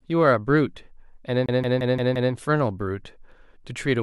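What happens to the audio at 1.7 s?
At 1.7 s the speech is caught in a CD stuck on one turn, which runs from 1.46 s to 2.33 s. A scratch throws the laser back one track at the same point on each revolution, so a single 174 ms slice of speech is played five times, with a brief mute at every jump back. The result is the rapid, evenly spaced stutter of a skipping disc before playback moves on.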